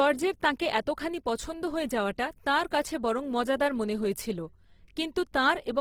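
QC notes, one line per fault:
Throughout, Opus compression: the speech sounds rough and grainy, with a noisy texture over the voice. This is likely low-bitrate Opus in its music mode, around 16 kbps, filling starved bands with folded or noise content. Bandwidth stays wide, reaching about 20.4 kHz.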